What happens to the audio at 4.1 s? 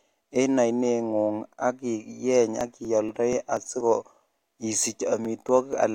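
At 4.1 s the speech is in the middle of a run of periodic USB or driver dropouts. The run lasts from 2.61 s to 5.73 s. Every 0.24 s, something blocks the audio path. Roughly 10 ms of sound is skipped each time, not filled with silence. The waveform jumps across each gap. That gives about fifteen evenly spaced ticks or pops. They are heard only where there is speech.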